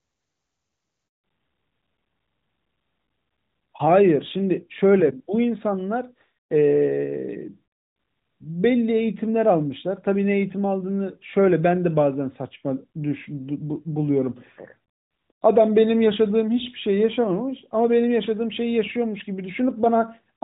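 At 1.08 s the sound cuts out for 160 ms, to 1.24 s. That's a handover gap: the call was being moved from one network to another, and no speech frames made it through during the switch. You hear the sound fall away in a few tens of milliseconds, then dead silence until the new link picks up. Whatever was said in that window is simply gone.

From 1.24 s through to the end, there's a fallback to narrowband. Before the gap, the sound has the open, airy top you'd expect from HD Voice at its highest rate, around 23.85 kbit/s, with at most faint codec colouring. After it, everything above 4 kHz is missing, which points to the older AMR-NB codec at its top 12.2 kbit/s rate. The sound goes duller and rougher, like an old landline.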